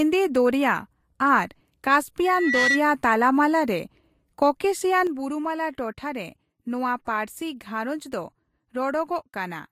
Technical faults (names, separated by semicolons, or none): loudspeaker feedback squeal; sudden gain jump